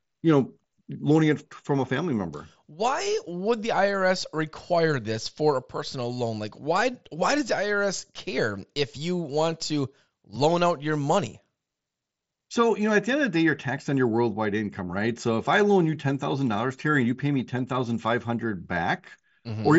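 No technical faults occur in the speech, which comes over a Bluetooth mSBC headset link as expected, with its content stopping around 7.7 kHz.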